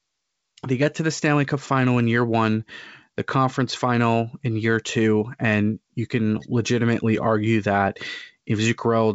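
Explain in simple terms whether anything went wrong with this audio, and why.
Nothing went wrong here: the speech came through G.722 wideband telephone coding, which carries sound only up to about 7.7 kHz, and that ceiling is simply how this kind of phone connection works rather than a fault.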